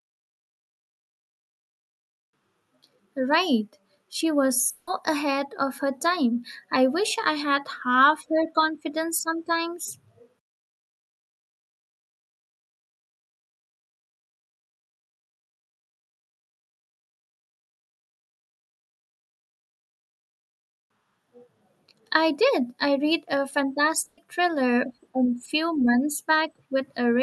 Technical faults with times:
4.69-4.89 long network dropout
24.05-24.19 burst of packet loss

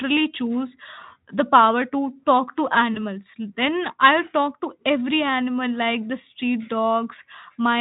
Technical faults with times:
2.93-3.01 VoIP packet loss concealed by the speech codec

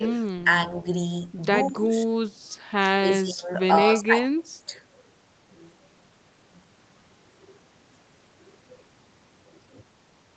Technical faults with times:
0.00-0.07 speech suppressed in double talk
1.70-2.13 speech suppressed in double talk
2.81-4.72 speech suppressed in double talk

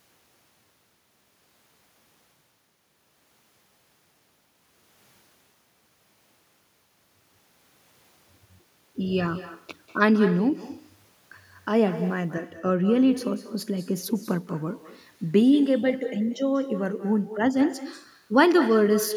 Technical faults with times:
0.00-19.16 echo with no canceller

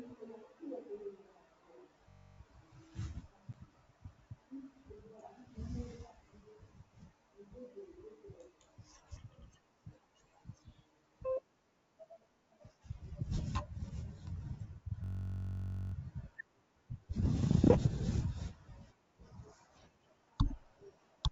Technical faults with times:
2.09-2.39 system hang loop
3.53-3.55 packet loss on an ADPCM call
15.04-15.94 system hang loop

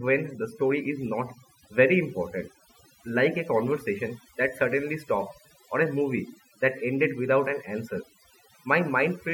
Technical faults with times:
0.00-9.34 overdone noise removal

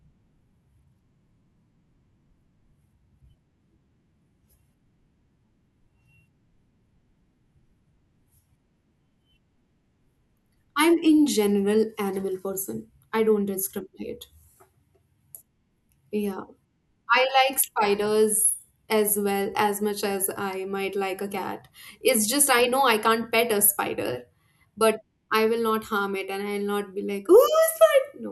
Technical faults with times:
none

